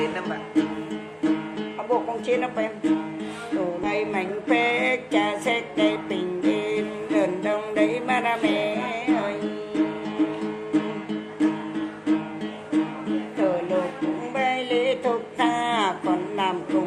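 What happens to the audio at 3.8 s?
A skip ahead at 3.83–3.85 s drops roughly 0.4 s of audio. Playback jumps forward with no gap, leaving a hard splice and a discontinuity in the waveform and spectrogram.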